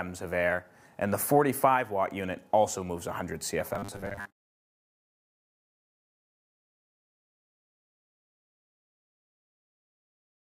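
From 3.75 s to the end, the sound turns into a rigid metallic buzz at 100 Hz: robotic sound from repeated short buffers. About half is likely repeated 10 ms fragments.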